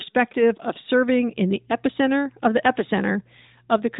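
From 1.29 s to the end of the speech clip, mains hum sets in: a steady low tone at 60 Hz, the power-line frequency, leaking into the signal through something like a ground loop or a nearby transformer. It sits well beneath the speech, roughly 35 dB down, heard most clearly in pauses. On a spectrogram it appears as a thin, unbroken horizontal line at 60 Hz, far below the narrowband speech energy that stops at 3.8 kHz. The waveform shows a faint, regular ripple in the gaps.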